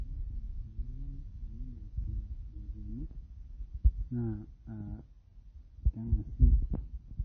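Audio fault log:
Throughout, MP3 compression: nothing above 6.3 kHz, plus plainly audible watery swirl on the speech, likely from a low-bitrate encode near 24 kbps, unlike a clean low-pass filter.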